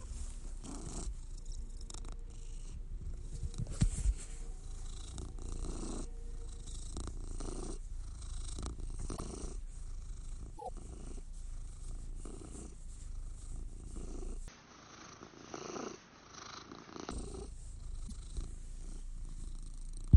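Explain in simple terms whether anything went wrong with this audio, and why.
There are three spots of repeated frames, little stutters where a chunk of audio plays again: at 9.16 s, at 10.57 to 10.69 s (a tiny 26 ms snippet looping three extra times), and at 18.07 s.

From 14.48 to 17.11 s the sound turns dull and a bit quieter, with nothing above 6.4 kHz and a faint new background. That's likely the input switched to a poorer device, with no gap at the changeover.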